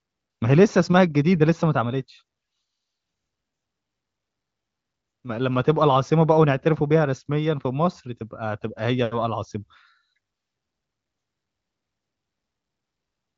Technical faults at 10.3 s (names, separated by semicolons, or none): none